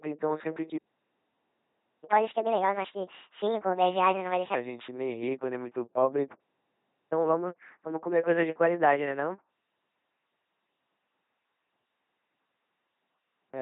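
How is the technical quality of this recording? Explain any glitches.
The technical quality is poor: heavy vocoding throughout, plus two dropouts that are each followed by a sped-up stretch.

LPC-10 vocoder: The speech has been squeezed through a 2.4 kbit/s LPC-10 codec. It rebuilds each moment from a simple vocal-tract filter driven by either a buzz or noise. Across the whole clip, the speech sounds robotic and buzzy, nothing reaches above 3.8 kHz, and wrong voicing choices cause stray buzz or hiss.

Playback stall: The player likely starved of data or was blocked. Output then cut to silence from 0.78 to 2.04 s (about 1.26 s) and again from 6.34 to 7.12 s (about 0.78 s). Each time, the speech halts in mid-flow and later resumes.

Catch-up at higher speed: After each stall, the player resampled its backlog faster to recover the lost time. From 2.04 to 4.55 s the speech runs at 1.5 times normal speed, about seven semitones higher. 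From 7.12 to 10.12 s it runs at 1.1 times, roughly one and a half semitones up. Both stretches then settle back to normal.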